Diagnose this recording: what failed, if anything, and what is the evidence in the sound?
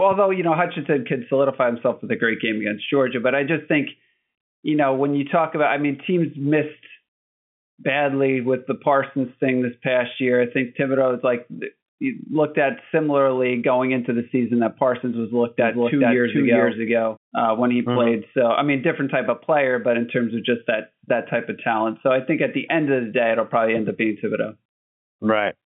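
From 15.59 s to 17.17 s the speech is doubled by a second, full-band copy trailing around 0.4 s behind and at roughly the same level. The echo has no decay or room colouring and cuts in and out abruptly at those edges. Its clean, undamped character, heard through the narrow telephone band of the G.711 line, likely points to a doubled audio track, with the same signal captured again through a slower path or held twice out of step by an edit.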